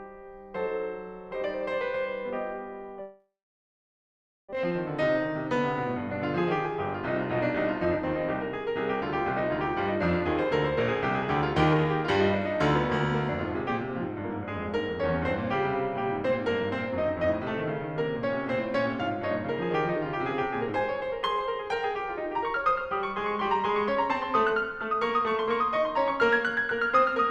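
From 3.01 to 4.55 s the music breaks into a fading buzz, then about 1.2 s of silence, returning with roughly a second missing. This is likely a long network dropout, not a brief gap. A jitter buffer speed-up follows at 4.64 to 9.17 s (1%), 11.73 to 13.72 s and 16.26 to 18.75 s (3%), and 19.97 to 26.11 s (4%, a few tenths of a second trimmed). Short pitch-period pieces are cut, so tempo rises slightly while pitch stays unchanged, unlike a resampling error.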